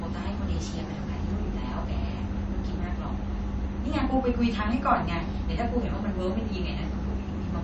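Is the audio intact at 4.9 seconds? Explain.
No, MP3 compression runs throughout, likely at about 32 kbps: weak lines drop in and out, giving watery speech, and a spectrogram shows a hard ceiling at 8.3 kHz.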